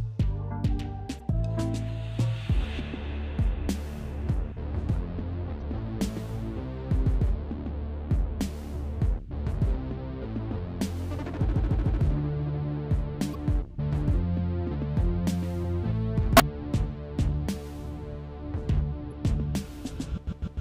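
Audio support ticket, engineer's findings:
Damaged data in a compressed stream. Brief blips, about 40 ms each, at 1.16–1.21, 5.58–5.62, 13.31–13.36, 16.37–16.41 and 19.08–19.13 s. Corrupt bytes in the encoded file. Decoder misreads frames, loses sync and resyncs on the next header.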